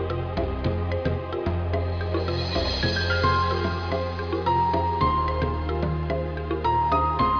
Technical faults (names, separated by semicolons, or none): none